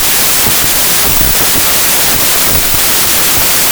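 From start to end, a wrong sample width turns the speech into loud broadband hiss, with the voice buried underneath and sped up about 1.33 times. This fits packed 24-bit data read as 32-bit. A waveform looks dense, and a spectrogram shows noise across all frequencies with faint, raised speech harmonics.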